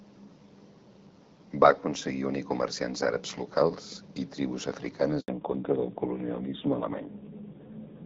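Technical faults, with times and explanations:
5.20 to 5.28 s, handover gap: Right after "àrabs locals i tribus" the speech fades out within a few tens of milliseconds and stays silent for 80 ms. The call was being passed from one network to another, and no speech frames got through during the switch, so whatever was said in that window is simply gone. On the waveform this shows as a short tapering drop to a flat line. The spectrogram shows a narrow vertical band that is empty across all frequencies.
5.28 s to the end, fallback to narrowband: Once the new link starts, the call is no longer on the AMR-WB (HD Voice) codec at 12.65 kbit/s, which carried speech clearly before the gap. It now runs on narrowband AMR at 5.9 kbit/s. Nothing above 4 kHz survives, so the speech turns dull. The low bitrate also adds a rough, raspy texture. On a spectrogram the energy ends abruptly at a hard ceiling at 4 kHz from 5.28 s onward, in contrast to the fuller upper band before the gap.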